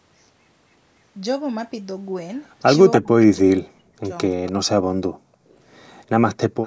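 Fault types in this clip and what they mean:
echo leak: A copy of the speech returns about 0.28 s late. It is loud near 2.9 s and faint later, likely leaking past an echo canceller.
speech suppressed in double talk: The speech dips by up to about 40 dB from 3.0 to 4.1 s and 4.4 to 4.9 s, likely from overlapping talk.
background gated by the echo canceller: The room sound drops by about 39 dB from 5.17 to 5.49 s. It returns when the canceller lets go.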